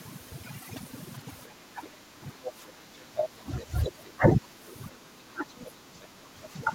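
Speech runs through overdone noise removal for the whole clip: the background sinks to near silence dotted with twinkling specks, and quiet parts of the voice are cut along with the noise. Unlike a level dip, this is constant and spectral. From 1.46 to 4.67 s and again from 4.9 s to the end at 6.74 s, the voice dips or breaks up in pieces, by up to roughly 20 dB in the first stretch and about 15 dB in the second. Most of each stretch is affected, about three seconds and one and a half. This is speech suppressed in double talk, likely an echo canceller turning the talker down while the far side speaks. It differs from the noise removal because whole stretches drop in level rather than single bands. Inside that span, brief scraps of a second voice, the other side's voice leaking through, appear at 2.44–2.51 s, 3.17–3.26 s and 3.83–3.91 s. The first scrap sits well below the talker, the third somewhat below, and the second nearly as loud. 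These are probably residual loudspeaker echo that the canceller missed. They are separate sound added on top, not the talker's own voice being removed.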